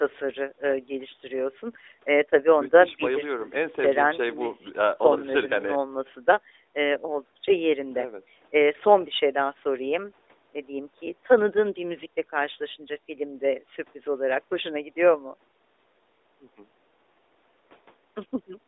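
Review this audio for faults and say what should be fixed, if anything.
Nothing stood out on listening to this speech, so there is nothing here that needs fixing.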